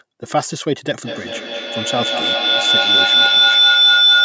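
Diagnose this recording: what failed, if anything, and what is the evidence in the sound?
A feedback howl in the call's acoustic path begins at 0.99 s and runs to the end. A tone near 4 kHz swells to about 8 dB above the speech, with the loop repeating roughly every fifth of a second, as two devices re-amplify each other. Ordinary echo would fade instead of growing.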